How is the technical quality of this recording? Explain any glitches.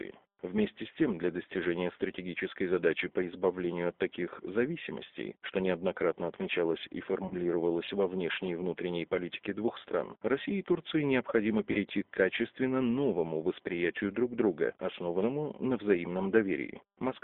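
The recording is intelligible but plainly degraded by narrowband codec coding, with two brief dropouts.

G.729 codec, throughout: speech is rebuilt from a vocal-tract filter and a few pulses at 8 kbit/s, so it sounds rough and synthetic. The spectrogram shows a hard band of 250 Hz to 3.6 kHz.

VoIP packet loss concealed by the speech codec, at 7.28–7.34 s (after "что неоднократно отмечалось и", before "во внешней и внутренней") and 11.72–11.78 s (before "к качественно новому восприятию"): about 30 ms of audio is missing, which fits a single lost packet. The decoder repeated its last pitch and filter, so each gap sounds like a short stretched smear that fades. On a spectrogram it shows as a smeared, stretched patch, and on a waveform the amplitude falls off.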